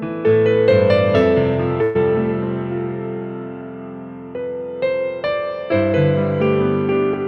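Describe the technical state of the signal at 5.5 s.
At 5.5 s the signal is intact, with no dropout, distortion, glitch or other fault audible.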